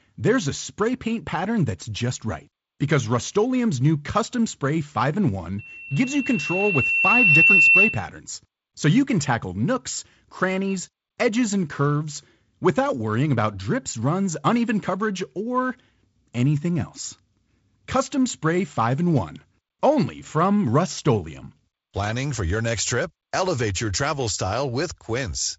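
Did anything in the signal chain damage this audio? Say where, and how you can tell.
Yes. Loudspeaker feedback squeal from the acoustic mic-speaker loop at 5.58–8.04 s: loop gain exceeds one at 2.7 kHz, swelling over about two seconds to roughly 10 dB above the speech. On a spectrogram it shows as a single brightening horizontal line.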